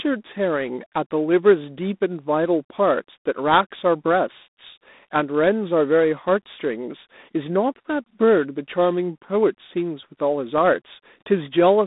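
A harsh, rasping hiss rides on the speech throughout and rises and falls with its level. This is G.726 ADPCM coding at 24 kbit/s, which leaves too few bits per sample. The sound is also squeezed into a telephone band of roughly 200 Hz to 3.7 kHz, with nothing above 3.8 kHz.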